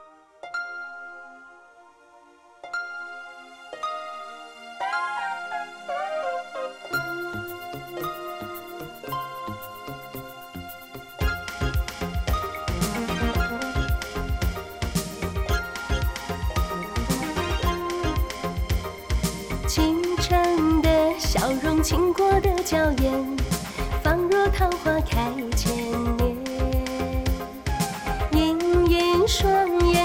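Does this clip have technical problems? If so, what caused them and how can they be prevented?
No, there are no technical problems to report here.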